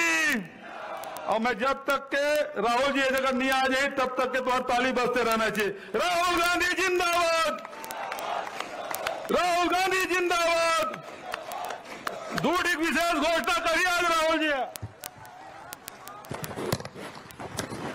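Word clock ticks run through the audio from 0.11 s to 17.94 s. They are short, sharp clicks at a steady rate of about one every 20 ms, so there are hundreds of them. The receiving device is not locked to the sender's clock. Each time the two clocks slip past each other, a few samples are misread and one sample is dropped or repeated. The fast tick rate suggests the clocks are about 0.1 percent apart.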